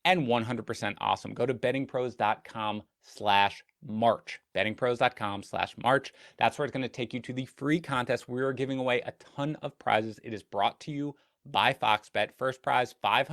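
Nothing in this speech recording stands out as a technical problem; there's just talking, with nothing to flag at any point along the way.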